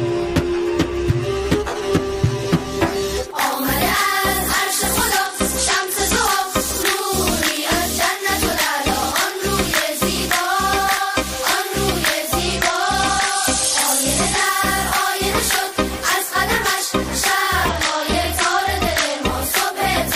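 Bluetooth SBC bit pool drops occur at 5.26 to 6.25 s, 12.40 to 14.45 s and 17.69 to 19.22 s. During each one the treble dulls and a gritty noise rises, then clears when the rate recovers. This fits a congested link that lowered the bit pool from 31 to 11, roughly 83 kbps, which starved the top sub-bands and coarsened the rest.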